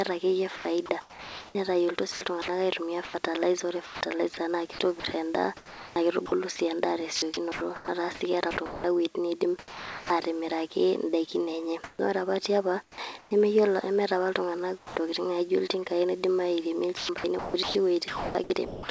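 From 0.56 to 10.1 s, the speech is chopped by the voice detector. The sender likely switched its detector on and off repeatedly here. About 2.7 s in total was swapped for comfort noise. Quiet syllables and word edges drop out.

From 11.84 to 11.99 s, comfort noise replaces the background for 0.15 s. This is likely a pause in transmission. The real background sits about 31 dB below the loud speech. The fill comes in about 8 dB louder than the real background. It is steady and featureless, with none of the room's detail.

From 12.83 to 12.98 s, sound is dropped by the voice detector. The detector likely mistook a quiet stretch of speech for background and stopped sending. About 60 ms of speech is lost under 0.15 s of comfort noise. The speech gives way to a smooth hiss and returns when the detector fires again.

Comfort noise then holds the background from 12.83 to 13.31 s, replacing 0.27 s in all.

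At 14.78 to 14.96 s, comfort noise again replaces the background for 0.18 s, likely during a transmission pause. The real background here sits about 25 dB below the loud speech. This time the fill is about 7 dB quieter, so the room seems to dip away briefly.

From 16.97 to 18.89 s, the speech is chopped by the voice detector again. The detector likely toggled several times. About 0.96 s was filled with comfort noise. Word edges clip off. The G.722 call path passes nothing above 8 kHz.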